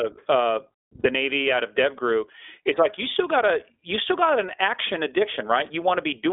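Throughout, the speech has the narrow, slightly rough and synthetic colour of the iLBC codec. Nothing passes below about 250 Hz or above 3.6 kHz, and the coding damage is plainly audible. Unlike smoother telephone codecs, it has a grainy edge that fits 15.2 kbps iLBC with 20 ms frames.

From 1.00 to 1.06 s come lost iLBC frames. The decoder fills the 40 ms gap by repeating the last pitch cycle with added noise, so it sounds like a brief held, buzzy vowel rather than silence or a click. This points to about two missing frames. The speech is clean again immediately, without the lingering smear of codecs that carry state across frames.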